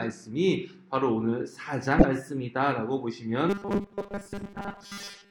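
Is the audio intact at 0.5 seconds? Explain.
Yes, at 0.5 seconds the audio plays through cleanly, with no dropout, click, distortion or other fault at that moment.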